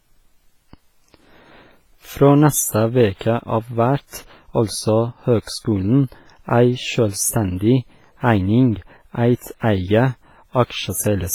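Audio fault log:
Throughout: WMA compression. The speech rings and sounds washy, with a hiss that swells and fades with the signal. This is likely heavy low-bitrate WMA coding, consistent with about 24 kbps, where long transform blocks smear quantisation noise and quieter detail drops out.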